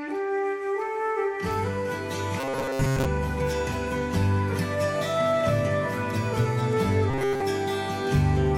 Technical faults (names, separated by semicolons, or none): robotic sound from repeated short buffers